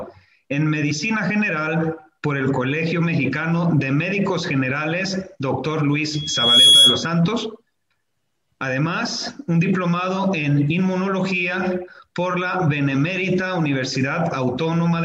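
At 6.13 s a loudspeaker feedback squeal starts: a single tone near 3.4 kHz swells over about half a second as the mic picks up its own speaker and the loop runs away at that pitch. It peaks well above the sound, about 10 dB louder, and then cuts off at 7.09 s.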